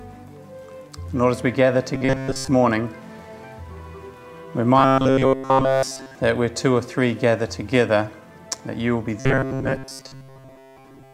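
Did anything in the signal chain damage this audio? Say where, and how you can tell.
Yes: robotic sound from repeated short buffers at 1.95–2.48 s, 4.78–6.15 s and 9.20 s to the end, each a rigid 133 Hz buzz. That pitch matches a 7.5 ms block replayed, likely a starved driver buffer looping its last chunk. The middle stretch is almost entirely repeats.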